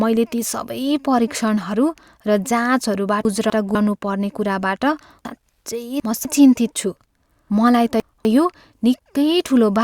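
Chunks out of order occur at 3.25–3.75 s, 5.25–6.25 s and 7.5–8.25 s, where a 250 ms block of speech plays one, three and two chunks late respectively. Nothing is lost, but each span sounds jumbled.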